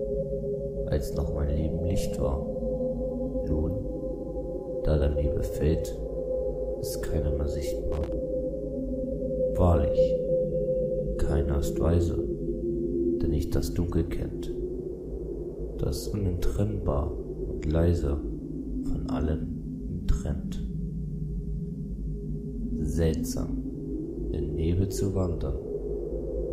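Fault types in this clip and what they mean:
Loose connector crackle: a worn or dirty contact somewhere in the signal path intermittently loses and regains connection, so the audio is chopped on and off in quick, uneven succession, and any DC present on the line turns each break into a pop. Here it is a single short burst from 7.92 to 8.12 s, about 0.2 s of irregular crackling and scratching that then clears.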